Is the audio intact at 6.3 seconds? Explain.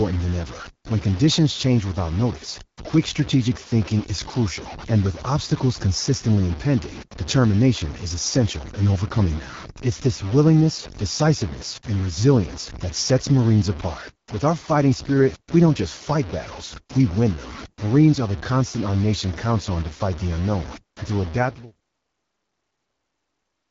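No. At 6.3 seconds the speech is coarse and grainy, with a gritty distortion that tracks the level of the sound and is harshest on the quieter parts, where it sputters or breaks up between steps. The error sits roughly 15 dB below the speech. This is most likely low bit depth without dither: the samples were truncated to very few steps, about 5 bits' worth, so the rounding error follows the signal instead of forming steady background hiss.

Over that same moment the speech also has a rough, raspy, buzzy quality, and its top end is dull and synthetic, with nothing above 7.5 kHz. That is the AMR wideband (HD Voice) codec running at one of its lowest rates. The damage fits about 8.85 kbit/s. At that rate the pulse-driven vocal tract model has too few bits to rebuild the voice cleanly, and the band above 6.4 kHz is only filled with shaped noise.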